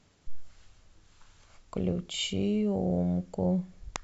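No technical faults can be heard anywhere in the recording.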